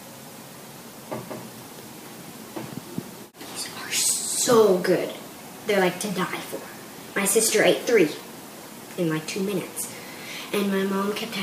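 Nothing here stands out as a technical fault; the audio runs along without any dropouts, glitches or other problems worth pointing to.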